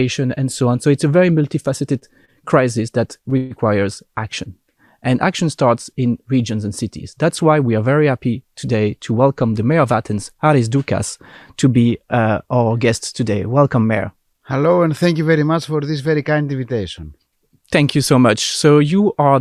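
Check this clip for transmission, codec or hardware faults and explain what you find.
Network delay problems show up five times: two brief stalls, one longer freeze, and two stretches of jitter buffer speed-up.

Short stalls from a late packet occur at 2.25–2.31 s and 3.30–3.34 s. Each time, the jitter buffer ran dry and the last sound was stretched by 29 ms and 15 ms. They sound like a brief hold with no gap.

A call audio freeze follows at 3.37–3.53 s. It was likely caused by packets held up in transit, and 131 ms was filled with a fading continuation that never drops to silence. It is longer than the stalls.

Jitter buffer speed-up runs at 9.11–9.80 s (110% speed) and 18.84–19.33 s (112%). Each time, about 70 ms of pitch periods were cut to shrink a backlog, so the sound hurries while its pitch stays the same.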